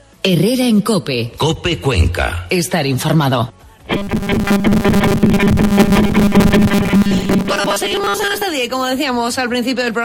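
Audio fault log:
3.93–8.43 s, robotic sound from repeated short buffers: the sound becomes a rigid, metallic buzz fixed at 200 Hz that only loosely follows the underlying audio. The likely cause is new audio arriving too seldom, so playback fills the gaps by looping the last brief stretch while the real material is skipped. The buzz pitch fits a 5 ms buffer. Most of what plays in this stretch is repeated rather than new, and that fixed repeat rate sets the pitch.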